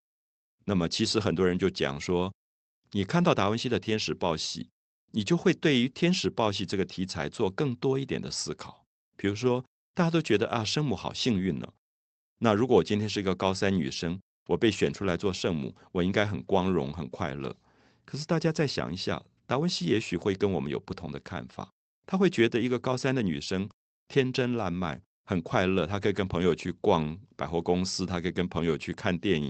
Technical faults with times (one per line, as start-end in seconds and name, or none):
none